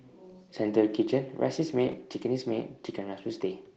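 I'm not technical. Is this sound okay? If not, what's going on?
No. At 1.87 to 1.93 s there's a lost packet rebuilt from error correction: a missing piece of the call was patched from a rough backup copy, so the sound turns briefly grainy instead of dropping out.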